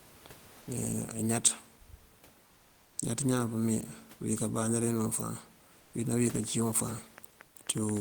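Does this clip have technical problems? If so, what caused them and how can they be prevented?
Yes. At 0.61 to 0.67 s there is sound dropped by the voice detector. About 60 ms of audio gives way to steady noise, and roughly 30 ms of real sound is lost. The sender's voice detector mistook part of the sound for background and stopped transmitting. The receiver filled the gap with synthetic noise until the detector fired again. This likely comes from Opus discontinuous transmission (DTX). Lowering the detector's threshold, or disabling DTX, prevents it.

Comfort noise replaces the background at 2.45 to 2.97 s, 5.79 to 5.93 s and 7.45 to 7.55 s. In each pause the room noise, which sits about 28 dB below the speech, is swapped for a smooth, featureless hiss. That hiss is about 2 dB quieter. The sender stops sending during silence, and the receiver synthesises noise shaped like the background. 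The likely source is Opus DTX again. Turning DTX off keeps the real background throughout.

A train of clicks runs from 6.44 to 7.98 s. There are about seven similar pops, arriving unevenly at around 3.9 per second. They peak at roughly the speech level, and they sound over both the speech and the pauses. This pattern likely comes from electrical interference from nearby equipment or a faulty connection or power supply. Moving devices apart, using shielded cables and checking the interface connection should stop it.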